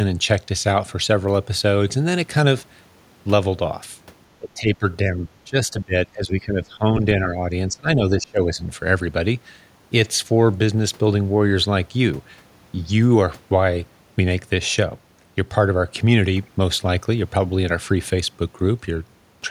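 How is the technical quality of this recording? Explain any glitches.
Three stretches of speech suppressed in double talk, at 4.39–4.85 s, 5.04–7.46 s and 7.68–8.6 s. The speech dips by roughly 15 to 25 dB, likely because an echo canceller turned it down while the far end talked over it.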